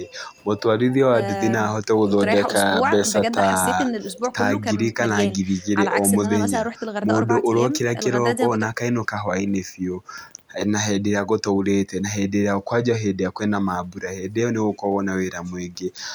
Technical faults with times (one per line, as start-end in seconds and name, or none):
none